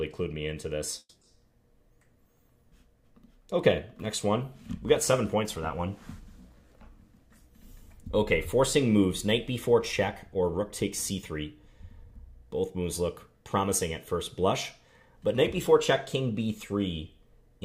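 At 0.99 s the audio stalls for about a quarter second in a call audio freeze, resuming at 1.23 s exactly where it stopped. The last sound is stretched into a fading buzz or hiss that ends in 40 ms of silence, filling 220 ms in all, so nothing is lost but everything after runs 220 ms later. On a spectrogram this shows as smeared horizontal bands thinning to a blank strip. The cause is likely a jitter buffer running dry during a packet delay.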